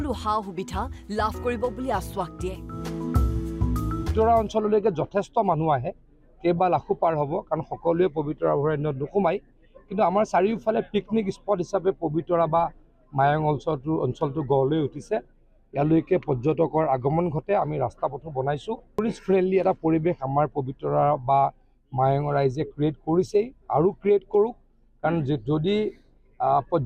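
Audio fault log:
No faults detected anywhere in the audio.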